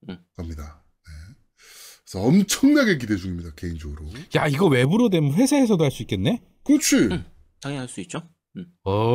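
From 4.85 s to 6.77 s the speech takes on channel delay (comb filtering). One channel runs late by a fraction of a millisecond, about 0.3 ms, and when the pair is folded to mono the shared content cancels at regularly spaced frequencies, the first falling around 1.5 kHz. The result is a hollow, phasey tone over that stretch, with fixed notches that do not move as the voice changes.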